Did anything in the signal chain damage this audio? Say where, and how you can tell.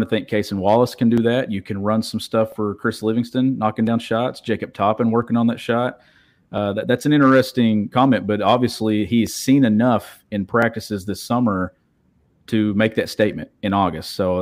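Yes. A regular click recurs in the speech every 1.35 s, from 1.18 s to 13.33 s, about ten in all. The pattern points to clock drift buffer slips at the driver or buffer stage, likely two devices on independent clocks differing by a few hundred parts per million, so a few dozen samples are periodically dropped or repeated. On a waveform each slip shows as a small discontinuity, and on a spectrogram as a thin, evenly spaced vertical streak.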